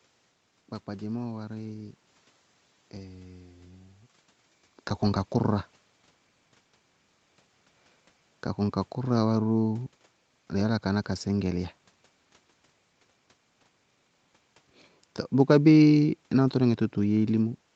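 No system faults; what's audible is the call microphone's normal bass cut and band limit at 8 kHz, background room noise, and level changes at around 4 s and near the end where the talker shifts position.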